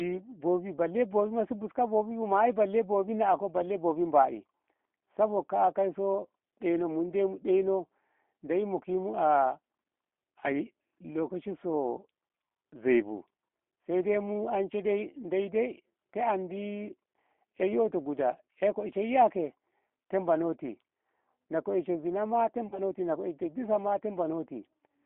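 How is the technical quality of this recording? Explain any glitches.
The recording has plainly audible speech-codec coloration throughout and one brief dropout near the end.

G.729 codec, throughout: the speech is narrowband, confined to roughly 250 Hz to 3.5 kHz. The voice is rebuilt from a vocal tract filter, a pitch predictor and a few pulses per frame. The plainly audible roughness and synthetic edge point to an 8 kbit/s VoIP link.

VoIP packet loss concealed by the speech codec, 22.68 to 22.81 s: about 40 ms of audio went missing, which fits two lost packets. The decoder filled the gap by extending its last pitch and filter at falling gain, so the sound smears into a fading buzzy tone or coloured noise and stays weak briefly afterward.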